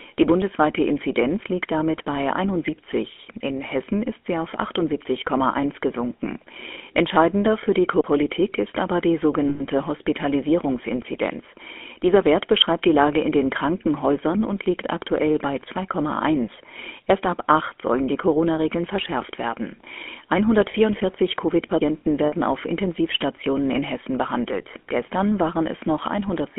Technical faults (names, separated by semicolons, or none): GSM full-rate codec; CD skip; lost GSM frames